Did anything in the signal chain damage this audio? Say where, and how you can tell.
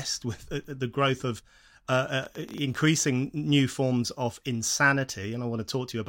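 Yes. From 2.23 to 3.09 s a train of clicks ticks over the sound, around ten uneven pops at roughly 13 per second, peaking a few dB above the audio. The similar pulse shapes likely point to interference on the analogue wiring or a faulty connection or power supply.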